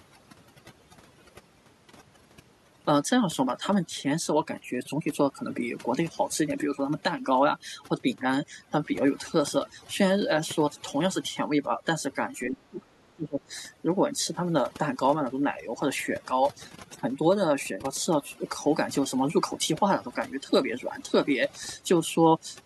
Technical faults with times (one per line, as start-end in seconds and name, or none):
0.00-22.65 overdone noise removal
12.45-13.52 speech suppressed in double talk
13.52-13.57 other side's voice leaking through